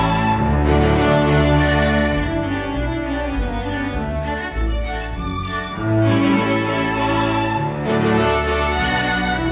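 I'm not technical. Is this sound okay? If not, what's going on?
Yes, nothing stood out as wrong when listening to this recording, so there's nothing here that needs fixing.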